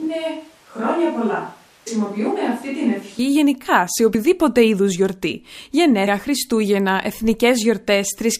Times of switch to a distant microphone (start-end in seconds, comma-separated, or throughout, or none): 0.00-3.19